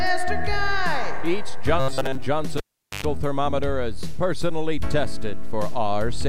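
From 1.8 to 2.27 s, the sound turns into robotic sound from repeated short buffers. It becomes a rigid, metallic buzz pitched at about 133 Hz. The likely cause is a player repeating a roughly 7.5 ms buffer while new audio arrived too seldom. Most of that stretch is repeats.

At 2.57 s, a cable is pulled and plugged in. A pop cuts the sound. Near silence follows for about 424 ms. A 101 ms burst of 50 Hz mains buzz comes as the plug's tip touches. A second pop ends it at 3.05 s.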